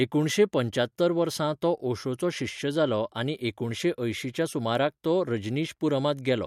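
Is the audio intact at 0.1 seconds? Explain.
Yes, at 0.1 seconds the speech plays through cleanly with no audible fault.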